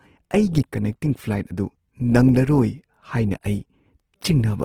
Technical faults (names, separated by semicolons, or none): Opus compression